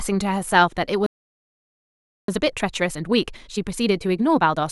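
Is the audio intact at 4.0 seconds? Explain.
No. At 4.0 seconds the speech is in a time-compressed catch-up, running from 2.28 s to the end of the clip. The player trims its backlog by cutting out small pieces and cross-fading the joins. Speech runs about 1.25 times fast at normal pitch.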